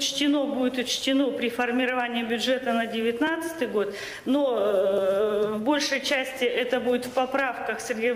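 The audio has two blocks of digital silence, at 3.27 s and 4.98 s. Each gap lasts about a millisecond, heard as a tick where the sound cuts out abruptly and back.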